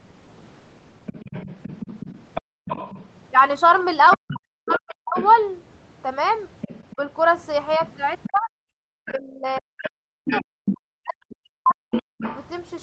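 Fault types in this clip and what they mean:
other side's voice leaking through: A second, fainter voice sits under the speech at 1.06 to 3.06, 4.1 to 5.35, 6.61 to 10.77 and 11.91 to 12.38 s, likely loudspeaker echo the canceller missed. It sits roughly 10 to 20 dB down, getting more prominent later. Unlike the dropouts, it adds sound.
background gated by the echo canceller: The room sound itself vanishes for brief moments, about 40 dB down, from 2.41 to 2.65 s and again from 8.79 to 8.84 s, then returns. This differs from double-talk suppression because only the background gaps, briefly.
speech suppressed in double talk: The talker's own voice sinks, by as much as roughly 40 dB, during 4.16 to 5.16 s and patchily across 8.26 to 12.25 s, likely because both sides spoke together. It is the main voice that weakens, over seconds rather than a momentary background gap.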